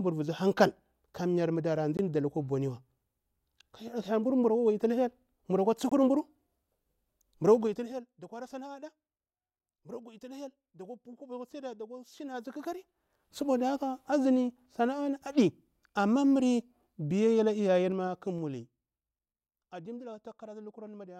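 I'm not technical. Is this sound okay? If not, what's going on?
No. Two kinds of fault can be heard in this speech recording.

Block of digital silence: at 1.97 s, and again from 5.89 to 5.92 s, the sound drops out completely for about 20 milliseconds. The audio snaps to total silence and back with no fade, so each gap comes across as a click or tiny hole. This most often happens when the playback or recording program fails to deliver its next chunk of audio in time. The second gap's length fits a 1024-sample buffer.

Zipper noise: three volume changes are made in small jumps instead of a continuous slide. The level goes down from 7.52 to 8.06 s, up from 12.28 to 13.38 s, and down again from 17.84 to 19.08 s. Each jump leaves a faint click. In the first change the jumps come about fifteen times a second, and in the other two about seven times a second, so you hear a ticking or zipping sound riding on the speech.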